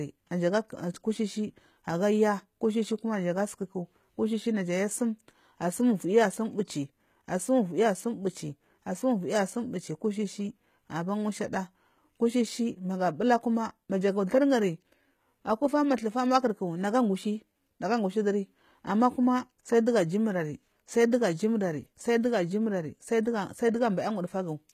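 A speech recording with plainly audible HE-AAC compression throughout, likely from a low bitrate around 20 kbps. Unlike ordinary lossy coding, which dulls the treble, the highs stay bright but synthetic, copied up from lower bands. S sounds turn gritty and metallic, and nothing remains above 14.9 kHz.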